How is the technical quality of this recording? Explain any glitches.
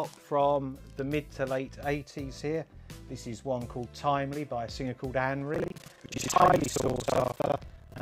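The recording is clean until 5.52 s, then buffer tearing sets in and lasts to the end. The writer and reader of the playback ring buffer have drifted, so each 40 ms period mixes new audio with roughly half from about 70 ms earlier. The result is a robotic 25 Hz buzz. On a waveform this shows as regular hard discontinuities every 40 ms, and a spectrogram shows vertical striping at that rate, present only where there is signal.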